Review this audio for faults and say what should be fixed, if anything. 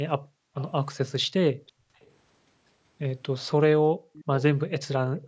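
Background gated by the echo canceller: the room sound drops out at 0.18–0.55 s, 1.53–2.0 s and 3.82–4.13 s, each time by about 40 dB, and again from 5.17 s to the end by about 17 dB. The canceller suppresses the microphone hard while the far end plays. Gentler suppression with comfort noise would keep the background steady.

Echo leak: faint delayed copies of the speech appear at 0.58–0.71 s, 1.67–1.72 s, 2.02–2.06 s and 4.13–4.43 s, about 20 to 35 dB below the speech and consistently 375 ms late, which points to a loudspeaker return that the canceller likely failed to fully remove. Better canceller convergence or reduced loudspeaker-to-microphone coupling would fix it.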